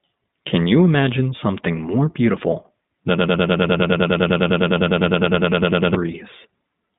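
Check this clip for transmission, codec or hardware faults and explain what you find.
Yes, there are three problems here: a narrowband codec running the whole way through, a long stuck loop in the middle, and one brief dropout near the end.

The whole clip has been through the iLBC codec. The band runs only from about 150 Hz up to 3.7 kHz, so there's no air or sibilant sparkle at the top and not much weight at the bottom. The codec damage is plainly audible: the speech stays clear but has that slightly rough, synthetic edge. iLBC codes each 20 ms frame on its own, and the rate it sounds like fits its 15.2 kbps mode.

From 3.18 s to 5.95 s there's a broken-record loop. A chunk about 101 ms long repeats back to back, roughly 27 times, and produces an exact repeat for almost three seconds. The likely cause is a stalled player or stream that kept resending the last fragment it held. Whatever speech belonged in that window is simply gone.

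At 5.50 to 5.53 s, inside that loop, there are lost iLBC frames. The gap is about 20 ms, which fits a single dropped frame. The decoder covers for the missing packet by repeating the last pitch cycle with some noise mixed in, which gives a tiny buzzy, held-vowel smear. Because iLBC frames don't depend on each other, the audio snaps back right after.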